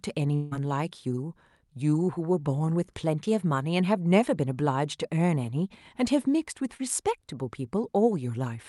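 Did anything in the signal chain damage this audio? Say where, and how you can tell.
Yes. From 0.35 to 0.53 s the sound smears into a fading synthetic buzz or hiss for about 160 ms, then resumes. That is likely a long network dropout, masked by receiver extrapolation.

At 6.77 to 6.81 s, a brief 20 ms smear appears. That is short concealed packet loss. The decoder extrapolated the missing frame, then blended back.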